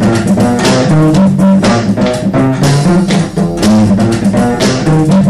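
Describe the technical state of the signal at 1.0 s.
At 1.0 s the signal is in hard clipping, as it is across the whole clip. It is driven about 13 dB beyond what the stage can pass, so the waveform is sliced flat wherever it exceeds the ceiling, which here means nearly a third of the samples. The square-edged tops throw harmonics high up the spectrum, heard as a harsh, buzzy fuzz on every loud passage. Soft saturation rounds its peaks and sounds warmer, without this gritty edge.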